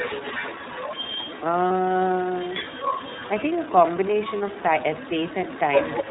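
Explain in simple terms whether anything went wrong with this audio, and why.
The speech sounds muffled and slightly rough, a bit synthetic, with no crispness at the top. That is the iLBC codec, a phone-call compression scheme that drops everything above 4 kHz and rebuilds the voice from simplified pieces, here plainly enough to hear.

A second, quieter voice runs underneath the whole clip, from the start to about 6.09 s. This is the other side's voice leaking through, most likely because the talker's loudspeaker was picked up by the microphone and the echo cancellation did not fully remove it.

Twice the sound briefly turns into a short held, buzzy smear, at 1.68 to 1.71 s and at 4.38 to 4.41 s. These are lost iLBC frames. Each gap is about 30 ms, which fits one missing packet. The decoder filled it by repeating the last bit of voice, and the speech recovers immediately afterwards.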